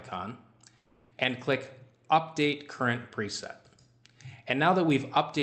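At 0.77 s the sound breaks up, and this looks like a long network dropout, likely packets stopped arriving for roughly a third of a second. The receiver papers over the gap by stretching the last bit of audio into a buzzy, fading hiss for about 340 ms, then there's a brief moment of near silence before the sound returns at 1.13 s with that chunk simply gone. Throughout, the Opus call codec caps the top end at around 8 kHz.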